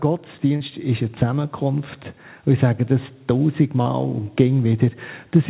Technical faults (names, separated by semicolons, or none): short concealed packet loss